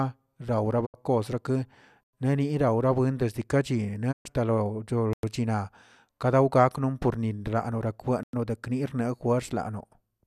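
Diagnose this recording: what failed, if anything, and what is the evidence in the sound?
The receiving stage of a digital broadcast failed twice. The speech mutes at 0.85 to 0.96 s and again at 4.11 to 4.27 s. Each cut ramps down over about 20 ms rather than clicking off. This is a digital broadcast dropout. The receiver stopped getting valid frames and muted until good ones returned. About 72 ms of speech is lost in the first hole and 120 ms in the second. That fits three and five lost frames.

A second fault sits at the storage or playback stage. Silent holes of 100 ms open at 2.03, 5.13 and 8.23 s. They are spaced 3.1 s apart, one after every 3 s of audio. This is a gap between chunks. The audio was handled in 3 s pieces, and silence was left at each join. The speech itself is not lost here. It is simply interrupted, and it resumes where it stopped.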